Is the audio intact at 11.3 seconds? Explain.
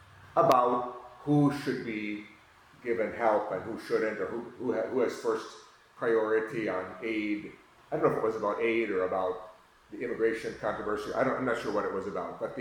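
Yes, at 11.3 seconds the audio plays through cleanly, with no dropout, click, distortion or other fault audible at that moment.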